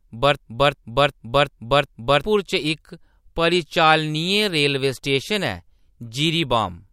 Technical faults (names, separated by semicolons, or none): system hang loop